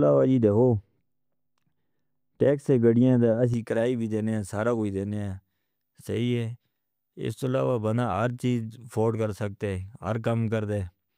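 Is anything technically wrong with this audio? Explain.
Yes. From 0 to 3.54 s, de-emphasis was applied wrongly: a treble cut meant to undo pre-emphasis was applied to speech that had none, or was applied twice. It drops about 11 dB at 10 kHz, leaving the speech dull and muffled.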